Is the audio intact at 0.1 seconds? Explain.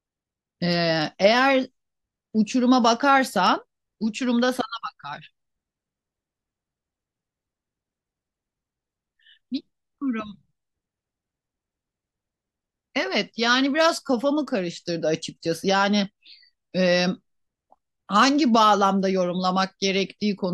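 Yes, at 0.1 seconds the speech plays through cleanly, with no dropout, click, distortion or other fault at that moment.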